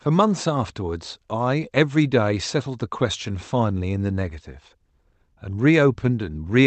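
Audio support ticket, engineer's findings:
No audible faults found; call path working as expected.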